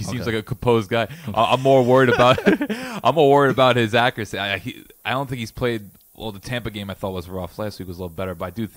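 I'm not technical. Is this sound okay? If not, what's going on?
No. A thin, steady hiss runs under the whole speech clip, brightest at the very top: low bit depth with noise shaping, which fits about 9-bit audio. Unlike ordinary background hiss, it's pushed into the highest pitches, and unlike plain low bit depth, it stays smooth rather than grainy.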